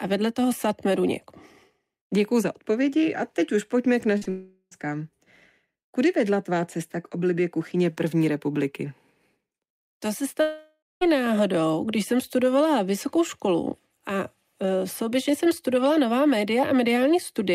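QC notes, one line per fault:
4.17 to 4.27 s, short concealed packet loss: two back-to-back gaps of about 40 ms and 20 ms were patched by extending the preceding sound, giving a brief smear and wobble. On a spectrogram the preceding sound runs on unnaturally flat for those few hundredths of a second.
4.29 to 4.73 s, long network dropout: roughly 0.42 s of audio is missing, likely from a network outage. The last sound is stretched into a buzz or hiss that fades, leaving about 20 ms of silence before the audio resumes further on. The waveform shows a decaying envelope and a short flat line.
10.41 to 11.03 s, long network dropout: a 0.6 s stretch is gone, likely for the same reason, and the concealment buzz or hiss fades into about 180 ms of near-silence. The spectrogram shows smeared, steady bands thinning to an empty gap before normal detail returns.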